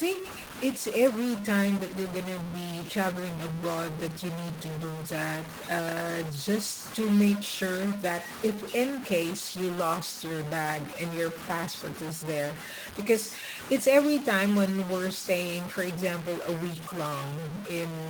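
A stuck bit, likely a single data line or converter bit held at a fixed value, corrupts this speech recording for its whole length, pushing roughly half of all samples off by that bit's weight in a pattern that follows the waveform. The result is distortion riding on the voice, and the pauses fill with noise because the stuck bit keeps flipping the small values around zero. Under that damage, the Opus voice compression at 20 kbps keeps its full bandwidth.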